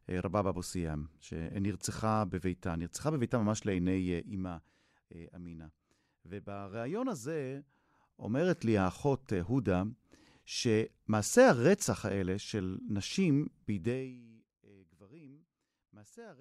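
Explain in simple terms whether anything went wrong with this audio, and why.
Nothing went wrong; the speech sounds as it should.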